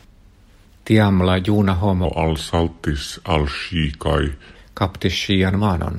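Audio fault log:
2.05–4.56 s, section at the wrong speed: speech drags to 0.82x, slower and roughly three semitones deeper, likely played back against the wrong clock.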